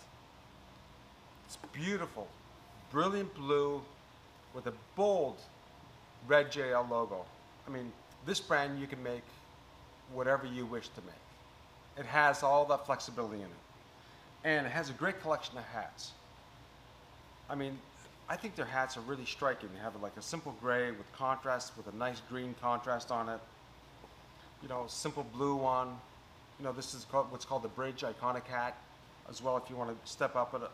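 Nothing in this one trips any alarms, so there's no technical fault to point to anywhere along the way.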